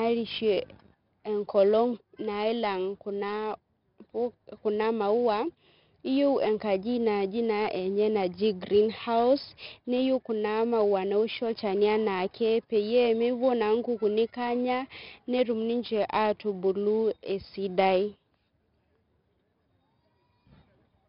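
4-bit ADPCM compression runs through the whole of this speech clip: each sample is coded as a coarse step from a predicted value, leaving a gritty, level-following hiss on louder passages and smeared attacks. Nothing sounds above about 5.3 kHz, pointing to a low-rate setting near 44 kbps.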